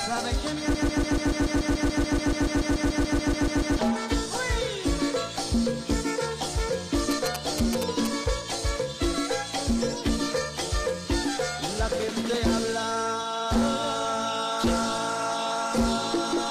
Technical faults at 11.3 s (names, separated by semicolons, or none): none